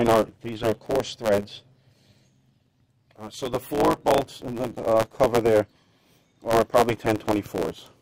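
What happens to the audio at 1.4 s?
At 1.4 s the sound carries a block size mismatch with truncation, present from start to finish rather than only at that moment. Each block is written longer than the next stage reads, so its tail is discarded, leaving a 109 Hz buzz at the block rate and audio running about 1.09 times fast. Unlike a resampling speed change, pitch stays near normal; unlike a padded mismatch, nothing is slowed or gapped.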